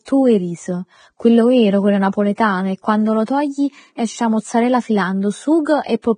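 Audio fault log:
throughout: Vorbis compression. The sound stops abruptly at 9.7 kHz, and the remaining treble is hissy and grainy, with roughened tones and dulled consonant attacks. This is likely heavy low-bitrate Vorbis coding, consistent with roughly 22 kbps, where fine high-frequency detail is replaced by noise.
2.35 to 2.38 s: pre-echo. A short hiss runs for about 30 ms ahead of a sharp attack, which sounds softened and smeared. The codec spread quantisation noise across the whole transform block, filling the quiet moment before the onset.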